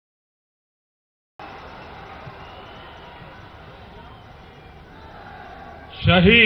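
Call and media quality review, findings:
Cut-off start: capture or stream opened late; digital silence 0 to 1.40 s, then sound enters abruptly mid-event at 1.40 s with no natural attack or fade-in.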